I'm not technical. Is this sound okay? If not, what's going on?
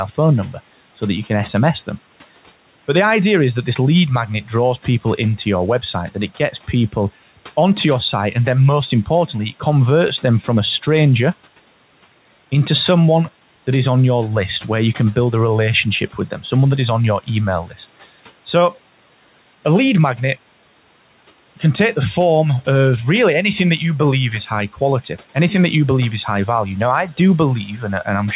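No. At 17.67 to 17.79 s, right after "is on your email", there is speech cut by the noise suppressor: the noise filter mistook a brief stretch of speech for background and turned it down, so it sounds swallowed.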